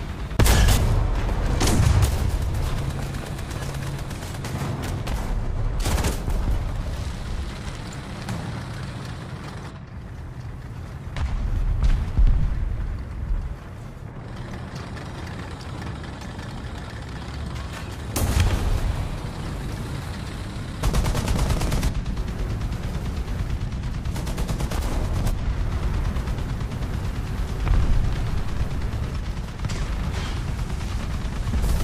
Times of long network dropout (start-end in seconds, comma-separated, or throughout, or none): none